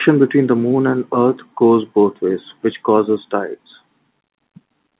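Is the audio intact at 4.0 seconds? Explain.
Yes, at 4.0 seconds the speech is intact, with only the normal narrowband sound of mu-law G.711 telephone coding at 8 kHz, which passes nothing above 4 kHz.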